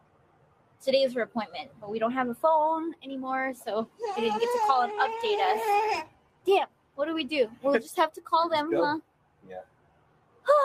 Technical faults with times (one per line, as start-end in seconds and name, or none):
0.00-10.65 noise suppressor applied to music or sounds
0.00-0.87 sound cut by the noise suppressor
1.26-1.89 sound cut by the noise suppressor
3.86-4.03 sound cut by the noise suppressor
6.03-6.99 sound cut by the noise suppressor
7.48-7.65 sound cut by the noise suppressor
8.10-8.32 sound cut by the noise suppressor
9.01-10.48 sound cut by the noise suppressor